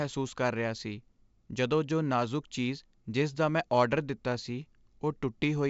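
No technical faults can be heard in this speech.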